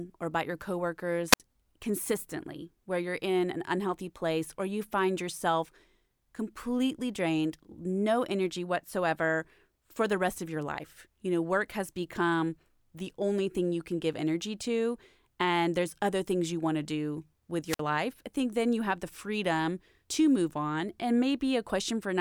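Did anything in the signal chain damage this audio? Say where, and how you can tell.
Yes, a wireless microphone squelch dropout in the analogue radio link, at 1.31–1.40 s and 17.66–17.81 s. As the carrier fades, hiss rises, then squelch mutes for about 62 ms and 54 ms. A spectrogram shows a broadband smear, then a blank column.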